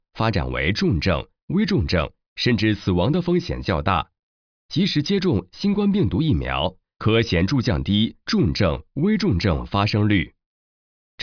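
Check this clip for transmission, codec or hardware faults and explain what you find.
No transmission, codec or hardware faults are audible here.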